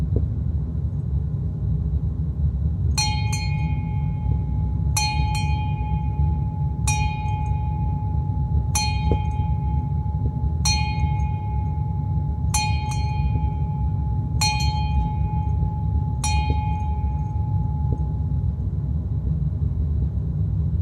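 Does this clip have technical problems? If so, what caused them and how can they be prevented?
No, no technical faults heard.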